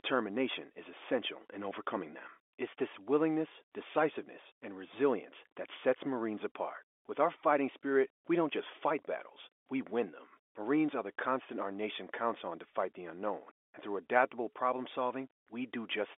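There are no technical faults to describe in time order in this telephone-band speech.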